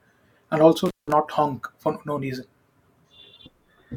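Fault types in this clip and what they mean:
Intermittent contact: a loose connection briefly opens, so the speech cuts out for about 170 ms near 0.9 s, with crackle at each edge.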